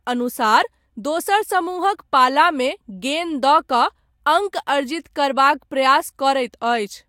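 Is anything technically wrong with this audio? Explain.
No, no technical faults heard.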